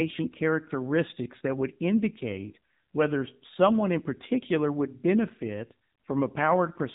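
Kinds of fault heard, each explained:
AMR narrowband mobile codec: The speech has been squeezed through the AMR-NB mobile speech codec, which rebuilds the voice from a vocal-tract model fed by sparse pulses. Nothing above 3.8 kHz survives, and the plainly audible buzzy, synthetic texture fits a low rate near 7.4 kbps.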